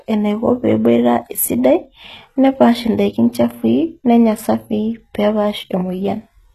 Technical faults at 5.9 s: HE-AAC compression

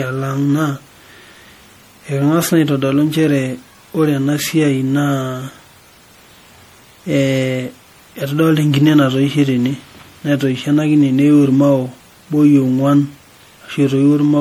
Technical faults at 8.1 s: generation loss

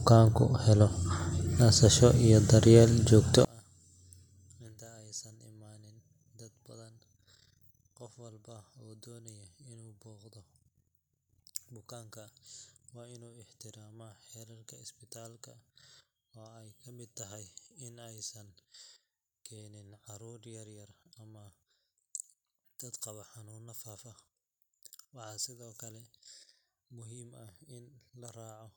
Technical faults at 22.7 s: one channel inverted

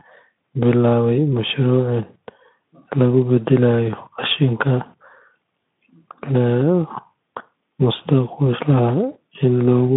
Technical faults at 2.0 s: none

